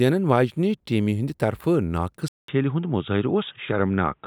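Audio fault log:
2.28 s to the end, input switched to a poorer device: after a silent gap of about 0.2 s the speech turns narrow and boxy, with nothing above 3.8 kHz. Loudness holds steady, and a faint new noise sits far beneath the speech. This is likely a change to a band-limited microphone or headset. A spectrogram shows a brief blank column, then empty space above a hard ceiling; the waveform shows a short flat gap but no step in level.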